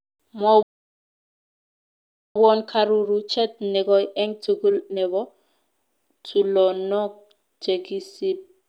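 At 0.63 s the speech cuts to silence for about 1.7 s, resuming at 2.36 s; this playback stall was likely the player running dry or being blocked. From 2.36 to 5.36 s the speech sounds hurried, about 1.25 times normal speed, yet holds its pitch: time-compressed catch-up, trimming and cross-fading small slices to recover the backlog.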